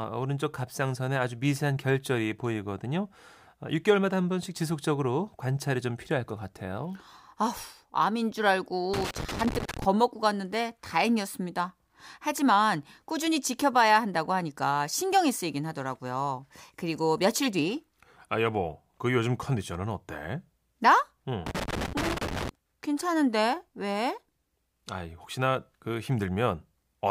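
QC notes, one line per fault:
8.94–9.85 s and 21.46–22.49 s, loose connector crackle: two irregular bursts of crackle and scratching, each about a second long, over the speech. A worn or dirty contact is making and breaking as it shifts, so the signal keeps getting chopped on and off.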